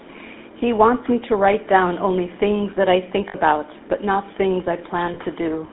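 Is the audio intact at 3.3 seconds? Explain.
No. From 3.28 to 3.35 s the sound stops moving and holds as a brief, rough, metallic ring before normal sound resumes. These are lost GSM frames. The decoder had no good data for that stretch, so it kept repeating the vocal-tract and excitation settings of the last good frame. A gap of about 60 ms fits three 20 ms frames, which is too short to fade fully to silence.

The speech around that moment, and across the whole clip, also carries the buzzy, gravelly roughness of the GSM full-rate codec. The audio is confined to roughly 250 Hz to 3.6 kHz. Its texture points to the 13 kbps full-rate coder, which models the vocal tract and drives it with a sparse, regularly spaced pulse excitation, keeping only every third sample. That coarse excitation is what makes the damage plainly audible.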